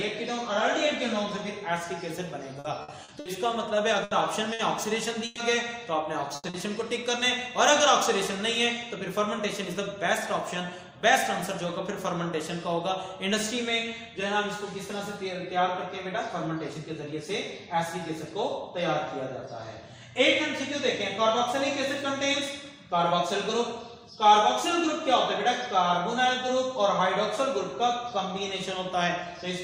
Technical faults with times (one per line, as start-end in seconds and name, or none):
2.59-6.57 repeated packet loss (robotic sound)
8.38-9.39 jitter buffer speed-up
16.28-17.12 jitter buffer speed-up